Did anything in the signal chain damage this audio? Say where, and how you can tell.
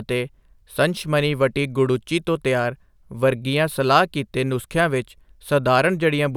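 Yes. From 2.65 s to the end, the resampler restarted on every block, a conversion-stage fault, apparently 44.1 to 48 kHz. Small block-edge errors every 50 ms produce a 20 Hz ticking buzz under the speech. A spectrogram shows thin vertical lines at that spacing, only where signal is present.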